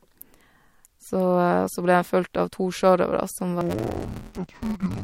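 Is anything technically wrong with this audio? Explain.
Yes. From 3.61 s to the end at 5.03 s, the speech turns dull and robotic, with a buzz at about 172 Hz. This is interleaved audio read as planar: in blocks of about 5.8 ms, which fits 256 samples, alternating left-right samples are split into halves. Each half plays at half speed, and the short block length leaves no clear octave drop.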